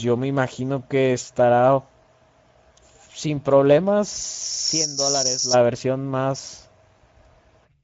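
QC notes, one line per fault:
throughout, Speex codec: the speech carries plainly audible coding damage, a hoarse, grainy roughness where the low-rate CELP coder lacks the bits to model the excitation faithfully, so the buzz behind each sound comes out noisy rather than clean. Nothing reaches above about 7.7 kHz, and the upper band sounds like shaped hiss rather than real detail, which fits a wideband Speex mode at around 16.8 kbps.
4.44–5.57 s, loudspeaker feedback squeal: a single tone near 5.4 kHz rises out of the speech, swelling over roughly a third of a second and then holding as a squeal until it cuts off at 5.57 s. It peaks around 5 dB above the speech. The pickup was hearing its own loudspeaker, and at that one frequency the loop gain passed unity, so the tone fed on itself and kept growing.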